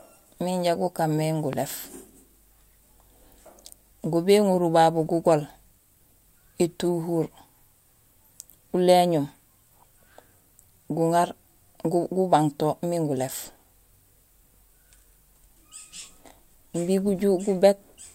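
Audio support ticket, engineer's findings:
Loud pop, 1.53–1.56 s, just after "miin ja gukaan mé". Single sharp pulse, peaking roughly 10 dB above the speech. Likely cause: a voltage step from a plug, switch or static discharge, shaped by the downstream circuitry into one brief thump. Differs from a dropout or buffer-glitch click because no speech goes missing. The pulse sits on top while the speech carries on underneath, and it happens once rather than recurring at a regular rate.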